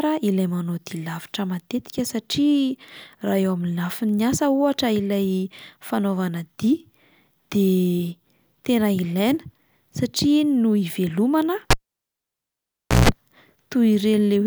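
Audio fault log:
11.71–13.09 s, cable pulled and plugged in: right after "no ivelomana" a pop cuts the speech to near silence for about 1.34 s, then roughly 0.16 s of 60 Hz mains buzz as the plug's tip alone makes contact, and a second pop as the signal returns.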